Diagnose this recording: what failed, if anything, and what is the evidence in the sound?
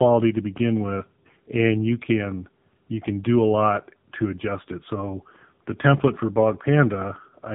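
Codec stage: tandem speech coding throughout. It sounds rough and warbly, with nothing above 3.8 kHz, which fits two AMR-NB passes, the second re-encoding the first pass's errors.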